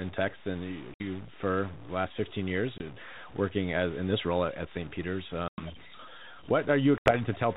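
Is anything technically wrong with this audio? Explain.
Yes. Throughout, the speech carries distortion that also fills the pauses with noise, likely a stuck bit in the data path. Unlike coding hiss, this noise persists when the speech stops.

At 0.94 s (60 ms), 2.78 s (20 ms), 5.48 s (100 ms) and 6.98 s (80 ms), there is packet loss on an ADPCM call. Each loss leaves a hard-edged silence. Afterwards the speech returns with a click, a level jump or brief distortion while the G.726 decoder's predictor resynchronises. That recovery is what distinguishes it from a plain dropout.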